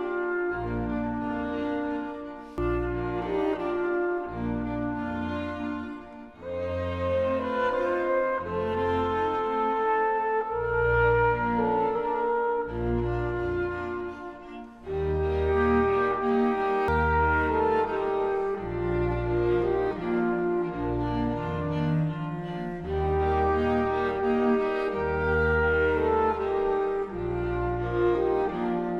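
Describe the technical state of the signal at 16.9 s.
Damaged data in a compressed stream at 16.88 s: a stretch of the encoded stream is corrupted, so the decoder misreads those frames, loses sync and hunts for the next valid frame header. The result is a brief chirp, squawk, click or short hole in the sound.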